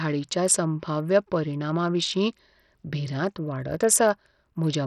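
Throughout the speech, the audio likely passed through Bluetooth SBC compression with a starved bit pool, which fits a bitrate near 64 kbps. Nothing survives above 14.5 kHz, the upper bands flicker in and out, and heavy coarse quantisation leaves gritty noise and aliasing riding on the sound.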